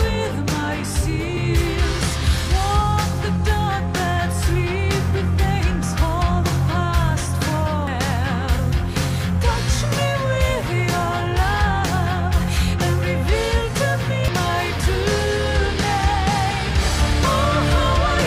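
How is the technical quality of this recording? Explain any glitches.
The recording is marred by four short blips at 1.37, 5.83, 7.87 and 14.28 s. They come from damaged data in the compressed stream: corrupted bytes make the decoder misread those frames and lose sync until it finds the next valid frame header.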